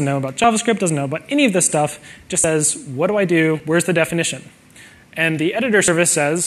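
Abrupt forward jumps in the audio occur at 0.44, 2.44 and 5.88 s, each skipping roughly 40 ms. These are likely dropped buffers from overruns.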